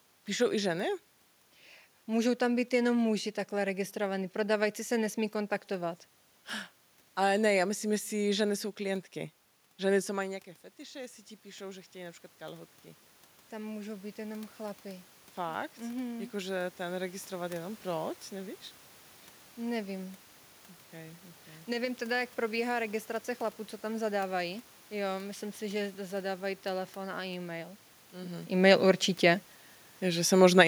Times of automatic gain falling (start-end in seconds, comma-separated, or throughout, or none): 30.38-30.63